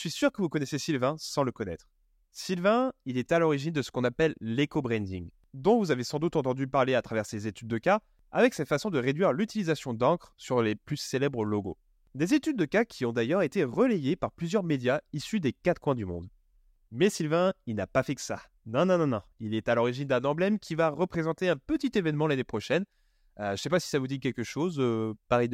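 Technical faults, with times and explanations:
No technical faults can be heard in the speech.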